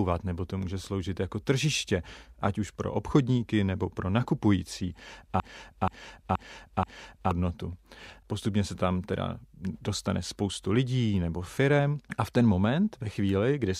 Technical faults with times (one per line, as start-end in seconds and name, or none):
5.40-7.31 broken-record loop